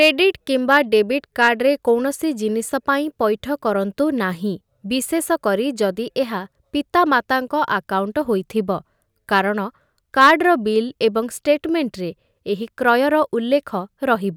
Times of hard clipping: 0.01-0.10, 1.42-1.49, 10.19-10.31

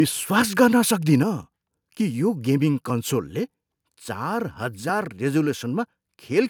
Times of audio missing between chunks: 0.91, 2.90, 4.89

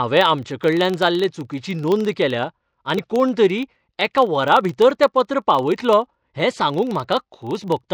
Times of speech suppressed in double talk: none

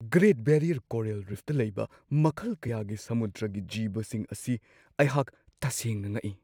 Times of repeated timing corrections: none

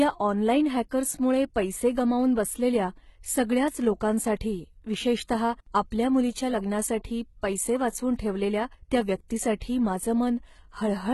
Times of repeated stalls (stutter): none

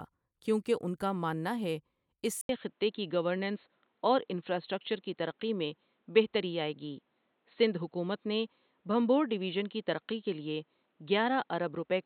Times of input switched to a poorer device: 2.41-12.06

